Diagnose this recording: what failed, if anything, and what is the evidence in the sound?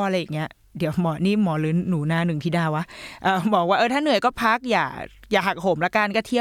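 Nothing failed here: no stage in the chain, from wiring and conversion through to playback, leaves any audible fault in this speech recording. There is no evidence in the sound that points to a problem to diagnose.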